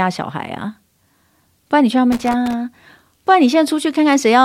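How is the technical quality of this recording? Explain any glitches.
The speech recording has one glitch, a burst of loose connector crackle from 2.12 to 2.54 s. For about 0.41 s a worn or dirty contact in the signal path keeps making and breaking as something shifts, so the audio is chopped on and off in quick succession, and any DC present on the line turns each break into a pop. The result is an irregular, scratchy crackle laid over the speech for that stretch.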